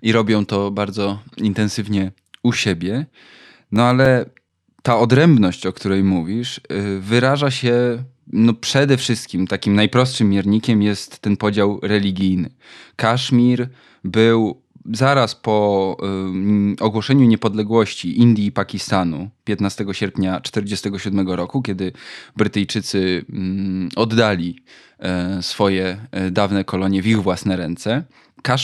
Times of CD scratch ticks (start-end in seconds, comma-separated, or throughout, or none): 3.76-4.93